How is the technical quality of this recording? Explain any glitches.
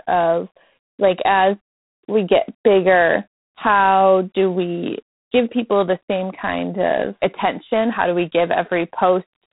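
The quality's poor throughout, from a heavy telephone-style codec. G.726 ADPCM damage runs across the whole clip. Each sample is coded as a few bits of difference from a predicted value, and the rasping hiss riding the speech, rising and falling with its level, fits the 24 kbit/s mode. There's also nothing above 3.9 kHz, so the speech sounds boxy and dull.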